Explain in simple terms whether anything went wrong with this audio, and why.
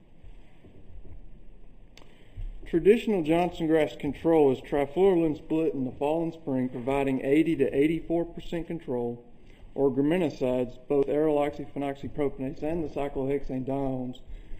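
Something did go wrong, and it lasts from the very start to the very end. One channel arrives a tiny bit late, by a fraction of a millisecond, and the two channels are then mixed together. This is channel delay, also called comb filtering. Where the two copies line up badly, parts of the sound cancel out. The first gap sits around 1.5 kHz, with more gaps evenly spaced above it. That is why the audio sounds hollow and phasey.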